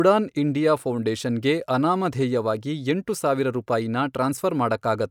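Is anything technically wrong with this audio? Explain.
No, the speech signal has no technical faults that can be heard.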